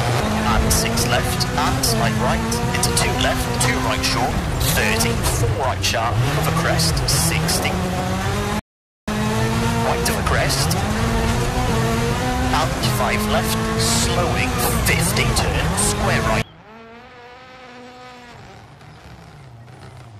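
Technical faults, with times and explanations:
8.59–9.08 s, rebuffering stall: playback drops to silence for about 0.48 s, then picks up at exactly the point where it stopped. The player ran out of downloaded audio and waited for more data, so nothing is skipped, but the gap adds 483 ms to the running time.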